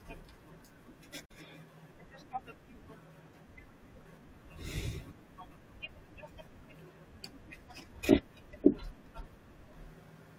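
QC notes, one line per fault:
1.25 to 1.35 s, digital broadcast dropout: the speech fades out over 8 ms to silence, then resumes. The receiver muted on a failed frame until clean ones returned. About 43 ms of programme is gone, which fits one lost frame.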